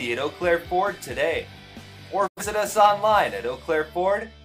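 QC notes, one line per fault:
2.26 to 2.42 s, digital broadcast dropout: the sound fades out over about 20 ms into a short silent hole and then resumes, with roughly 85 ms of programme missing, which fits two lost frames. The receiver muted until valid frames arrived again.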